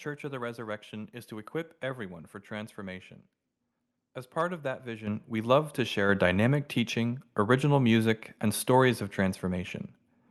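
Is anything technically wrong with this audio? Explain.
Yes. The microphone volume stepped up twice during the speech. The first jump comes at 5.07 s, between "part of that" and "we love to", and is about 8 dB. The second comes at 6.09 s, between "we love to" and "dynamic teaching original music", and adds about 4 dB more. Each time, the call software judged the microphone input too quiet and raised the device's input volume in a single step rather than gradually. The voice and the room sound behind it therefore get louder together at the same instant. That gives an abrupt lift in level instead of a natural swell. The audio also passes through the WebRTC call path as Opus, with a bandwidth of 12 kHz. Content above that frequency is missing, and the codec's coding texture can be heard.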